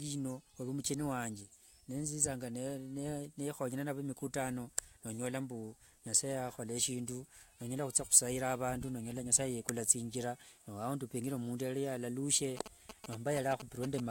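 From 12.57 s to 14.00 s, GSM signalling bursts break into the speech: a galloping dit-dit-dit of short buzzes pulsing at about 217 Hz, roughly ten decibels below the speech. A nearby 2G phone is sending brief groups of radio bursts while signalling, and the audio circuitry rectifies them into sound. Unlike steady mains hum, the interference comes in irregular clusters rather than a continuous tone, and it stops once the phone falls quiet.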